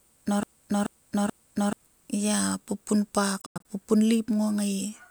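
From the very start until 1.73 s, the speech is caught in a broken-record loop. It is already under way as the clip opens. A 0.43 s fragment repeats exactly, back to back, three times. A stalled player or stream likely kept resending its last piece.

Between 3.41 and 3.65 s comes a Bluetooth dropout. Several short holes cut out about 160 ms of sound across 0.23 s. The longest gap lasts 93 ms. Packets likely missed the headphones' deadline, which fits about seven being dropped.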